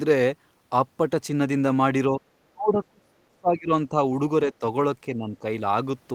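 The speech dips briefly at 2.12 to 2.21 s, nearly vanishes from 2.41 to 3.7 s, then dips at 3.89 to 3.95 s and 5.16 to 5.44 s. This is speech suppressed in double talk, likely an echo canceller turning down the talker along with the loudspeaker echo during overlap.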